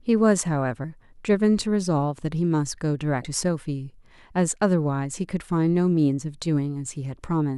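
At 3.22 to 3.25 s the speech breaks into a brief glitch: damaged data in a compressed stream. Corrupted bytes make the decoder misread frames and resynchronise at the next header.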